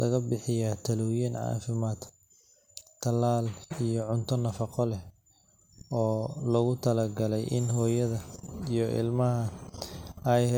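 Generation loss throughout: the speech sounds swirly, smeared and hollow, likely from roughly three passes through MP3 at about 128 kbit/s, each adding fresh quantisation noise.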